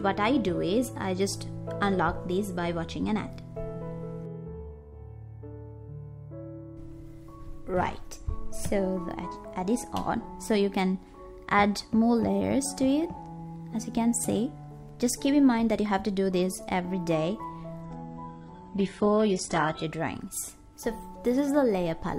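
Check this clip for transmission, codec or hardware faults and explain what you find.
One fault: an adaptive stream at a lower bitrate between 17.83 and 19.83 s. For those two seconds the player switched to a much leaner version of the stream, likely after the connection slowed, and the sound points to a drop from a full-rate AAC encoding near 96 kbit/s to HE-AAC at about 12 kbit/s. The quality changes abruptly with no gap: nothing survives above 11.1 kHz, and codec artefacts thicken until full quality returns.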